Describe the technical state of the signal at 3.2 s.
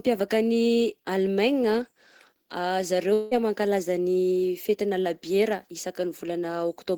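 At 3.2 s you're in the middle of what's most likely a long network dropout, running from 3.13 to 3.34 s. The last sound gets stretched into a fading buzz or hiss for about 0.18 s, then speech resumes at "mankalaza ny fetina labiera" with that stretch lost.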